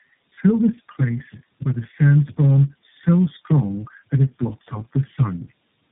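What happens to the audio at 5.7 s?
At 5.7 s the speech is still under tandem speech coding, which runs through the whole clip. It sounds like three low-rate speech codecs in a row, each recoding the previous one's output, so it comes across rough, muffled and warbly. A spectrogram shows nothing above 3.8 kHz and smeared, unsteady harmonics.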